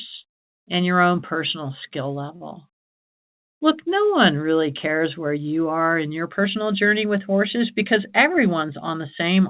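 At 2.36 to 2.42 s, just after "your own personal skill", there is a short stall from a late packet. The jitter buffer ran dry, and the receiver stretched the last sound for about 46 ms until the packet arrived. Nothing is lost, but that sound is held slightly too long with a slight buzz or dip.

From 7.84 to 9.24 s, following "personal journey with horses", a jitter buffer speed-up trims excess buffered delay. About 50 ms is cut away in small pitch-period pieces, so the speech runs at 104% speed with unchanged pitch. The band ends at 4 kHz throughout, which fits G.711 mu-law at 64 kbps.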